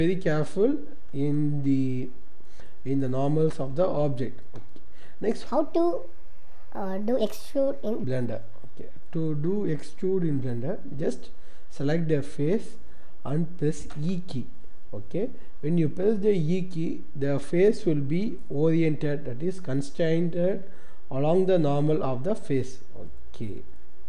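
From 5.46 s to 8.04 s the audio suddenly rushes and rises in pitch. It runs about 1.45 times too fast and sits about 6.5 semitones higher, then drops back to normal. This is a wrong sample rate fault. The samples were played out faster than they were captured, with no conversion, so speed and pitch rose together by the same ratio. That ratio fits material recorded at 22 kHz being played back at 32 kHz.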